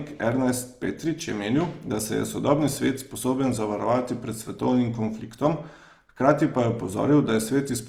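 Opus compression is plainly audible from start to finish, and the sound fits the codec's music (CELT) mode at a low rate, likely around 24 kbps. Band energies are held, so there are no obvious spectral holes or swirling, but the fine detail in bands short of bits has been replaced by folded or noise-filled content. Voiced speech therefore comes across rough and grainy, with a noisy texture on tonal parts, while the full audio bandwidth remains.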